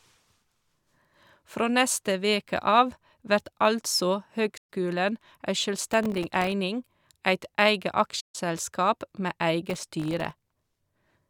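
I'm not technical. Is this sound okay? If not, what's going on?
No. Two separate problems affect this speech recording.

First, AAC frame loss with muting. Chunks of the compressed audio never arrived, so the player replaced each missing chunk with silence and faded smoothly in and out around it. You hear a soft dropout of about an eighth of a second at 4.57 to 4.69 s, right after "veke av vert altså", and a slightly longer one, about 0.15 s, at 8.20 to 8.35 s, right after "eit eige".

Second, processor overload crackle. The computer fell behind while preparing very small slices of audio, each well under a thousandth of a second, and missed dozens of them over a short stretch. Each missed slice became a tiny hard-edged gap of silence. Strung together, these gaps sound like a gritty crackle over the speech, from 5.93 to 6.52 s and again, longer, from 9.69 to 10.51 s.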